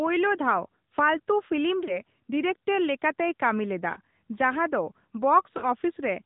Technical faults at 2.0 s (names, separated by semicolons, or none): AMR narrowband mobile codec; lost AMR speech frames